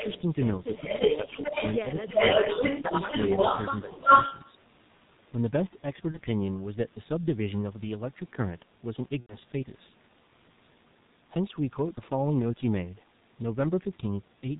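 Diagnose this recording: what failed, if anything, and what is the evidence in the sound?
Codec stage first: the whole clip has that muffled, hoarse G.723.1 sound, with nothing above 4 kHz and consonants smeared. The heavy damage fits the 6.3 kbit/s mode, where the coarse 30 ms frames update the voice model slowly.

Call processing: an echo leak shows up at 0.0 to 0.21 s, a bit quieter than the talker, then again from 0.64 to 4.51 s, somewhat louder than the talker. The delayed copy trails by about 0.33 to 0.35 s, most likely a loudspeaker echo the far end's canceller failed to remove.

Also in call processing: speech suppressed in double talk, around 0.8 to 1.54 s, where the voice dips a little in short pieces, and harder at 3.98 to 4.09 s. Both fall inside the echo stretch, likely the canceller ducking the talker along with the echo.

Network: VoIP packet loss concealed by the speech codec at 2.81 s and 6.11 s, each a brief stretched, fading sound that points to one lost 30 ms frame, and a longer fading stretch from 9.20 to 9.37 s, which fits about three lost frames. 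Each one leaves the voice weak for a moment afterward.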